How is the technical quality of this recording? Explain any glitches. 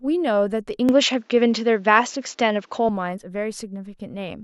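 Quality drops once. From 0.89 to 2.89 s, speech turns dull, losing everything above 7.6 kHz, with a level shift of about 5 dB and faint new background noise. The likely cause is an input switched to a poorer device.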